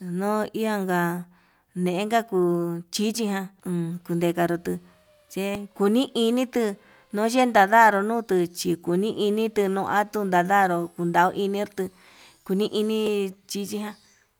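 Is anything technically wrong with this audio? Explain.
Yes. There is damaged data in a compressed stream at 3.60, 5.55 and 13.07 s. Corrupted bytes make the decoder lose frame sync, producing brief glitches in the speech.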